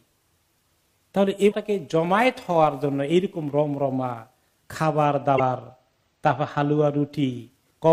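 A brief glitch breaks through between 1.48 and 1.53 s. This is damaged data in a compressed stream: bytes in that stretch of the file were lost or corrupted, so the decoder misread the affected frames, lost its sync, and hunted for the next valid frame header before playback picked up again.

From 5.06 to 7.11 s the top end turns dull, as though the sheen has been shaved off the highest frequencies. This is channel delay, or comb filtering: one channel runs late by roughly two samples, about 0.05 ms, and when the channels are folded to mono, content common to both cancels in evenly spaced notches. With so short an offset, the first notch falls near 10 kHz, which is why the loss is heard mainly as missing air at the very top.

Within that stretch, between 5.34 and 5.40 s, a second blip of damaged data in a compressed stream cuts in, again a short glitch. As before, corrupted frames in the compressed file forced the decoder to resynchronise on the next intact frame.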